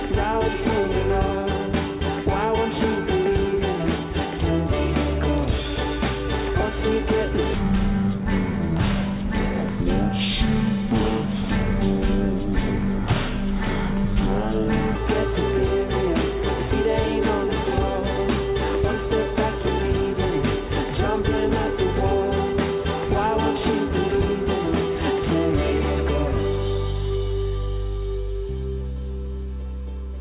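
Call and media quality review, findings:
Wrong sample rate, 7.54 to 14.95 s: sound runs at half speed, a full octave low, consistent with 16 kHz audio played back at 8 kHz without resampling.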